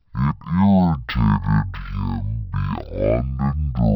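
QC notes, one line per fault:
Throughout, stereo read as mono: interleaved left and right samples play back in sequence as one channel, halving the speed and dropping the speech a full octave.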